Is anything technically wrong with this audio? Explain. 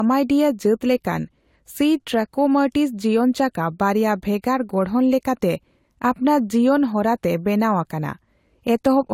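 Yes. Transcoding between lossy codecs runs throughout the speech. It likely passed through Vorbis and then AAC-LC, each fitting roughly 64 kbit/s. The second encoder wastes bits on the first one's artefacts and adds its own, so two kinds of swirly graininess overlap, with nothing above 16.6 kHz.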